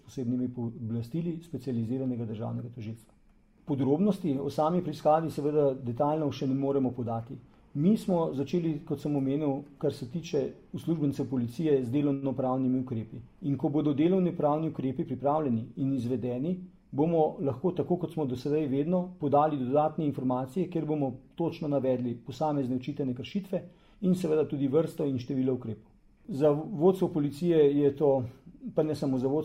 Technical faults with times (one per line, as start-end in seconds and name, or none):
12.13-12.25 short stall from a late packet
14.93-15.23 jitter buffer speed-up